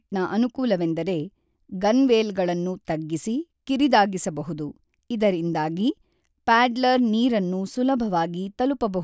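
No technical faults are audible.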